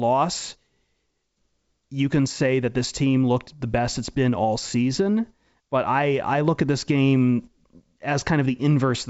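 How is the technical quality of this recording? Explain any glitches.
No technical faults can be heard.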